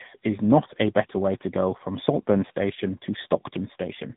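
Speech shows tandem speech coding throughout: rough, muffled and warbly, with nothing above 3.8 kHz, consistent with two speech codecs (likely GSM then AMR-NB) compounding artefacts.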